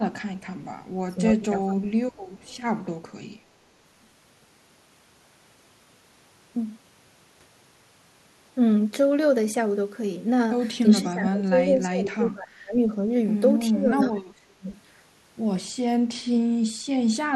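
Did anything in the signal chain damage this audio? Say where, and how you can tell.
Yes. Call processing likely let an echo leak through: a faint copy of the speech returns 368 ms late, at 0.38–0.47 s and 2.12–2.6 s.

Speech suppressed in double talk, likely from echo control misjudging both talkers: the voice dips sharply at 1.08–1.2, 1.38–1.89, 10.92–12.76 and 13.7–14.67 s.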